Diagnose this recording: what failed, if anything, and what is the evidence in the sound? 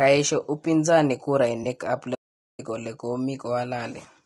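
At the codec stage the audio is likely running through low-delay AAC compression of the AAC-ELD kind, which fits a low bitrate near 32 kbps. Its short frames cannot resolve pitch harmonics cleanly, so the speech sounds rough and grainy throughout, with noise between harmonics and a thin, synthetic top band.

At the network or storage stage, AAC frame loss with concealment appears from 1.63 to 1.66 s. The decoder rebuilt the missing span from the last good spectrum, and the gap points to a single lost frame of about 20 ms. It is heard as a brief smeared, noisy patch.

A playback stall occurs from 2.14 to 2.60 s. The output goes silent mid-flow for about 0.44 s before the speech resumes. This is likely the player's buffer running dry, or its output thread being blocked, until data arrived again.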